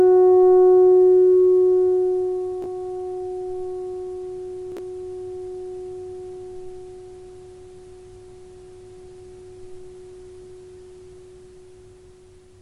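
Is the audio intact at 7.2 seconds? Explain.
Yes, at 7.2 seconds the audio runs on without any audible fault.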